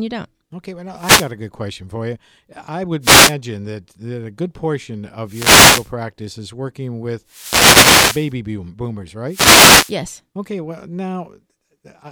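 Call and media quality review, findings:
Wireless microphone noise hit, five occurrences: 0.96–1.31 s, 3.01–3.35 s, 5.25–5.92 s, 7.25–8.35 s, 9.27–9.97 s. Short swish/static bursts. Probable component: analogue FM radio mic link, RF fading as multipath reflections cancel, letting receiver noise rise. Spectrogram: broadband hiss patches over the speech harmonics. Waveform: raised noise floor filling gaps between syllables.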